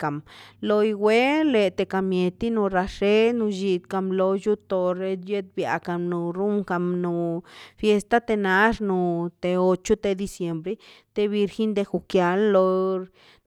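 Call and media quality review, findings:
No audible faults found in this speech recording.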